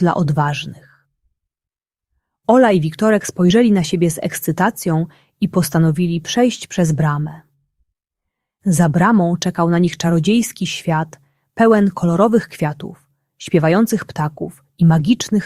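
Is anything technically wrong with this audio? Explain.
No, nothing technically wrong stood out on listening to this audio.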